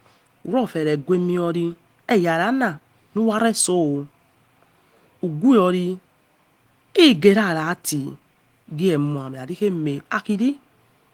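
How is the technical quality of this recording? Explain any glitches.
No glitches can be heard anywhere in the recording. The speech has been through Opus voice compression in its hybrid mode at about 20 kbps, which keeps the full band up to roughly 20 kHz and leaves only light traces of the encoding.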